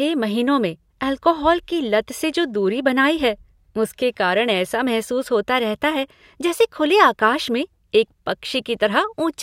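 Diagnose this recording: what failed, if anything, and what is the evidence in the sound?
Clock slip clicks run from 0.33 s to 8.72 s: faint, evenly spaced ticks in the speech, roughly one per second, about ten in all. The regular spacing, with each tick a single-sample jump, points to the converter stage. The likely cause is two devices on unsynchronised clocks differing by around 20 ppm, so a whole sample's worth of drift builds up about every second and one sample is dropped or repeated each time.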